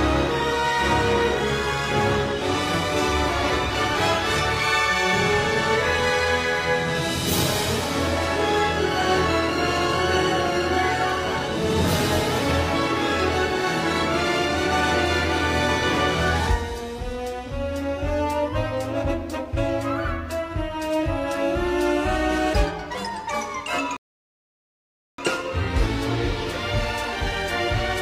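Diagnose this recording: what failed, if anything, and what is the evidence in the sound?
Playback failed with a rebuffering stall from 23.97 to 25.18 s: the player exhausted its downloaded audio, went silent, then resumed exactly where it stopped, adding about 1.2 s. The waveform flatlines and the spectrogram shows a clean full-band blank column, with nothing skipped on either side.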